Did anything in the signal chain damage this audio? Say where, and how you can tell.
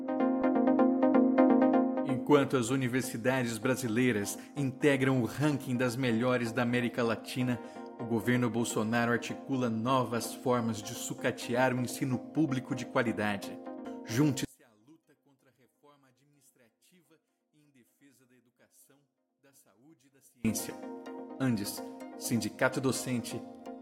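Yes. From 14.45 to 20.45 s the sound nearly disappears, dropping by about 35 dB and leaving only a faint residue. That's the signature of one channel inverted, likely a polarity flip in the analogue wiring, so the shared content cancels when the two sides sum to mono.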